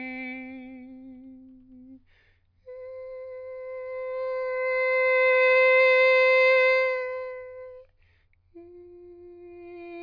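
Listening to this music clip, nothing stood out as a technical problem.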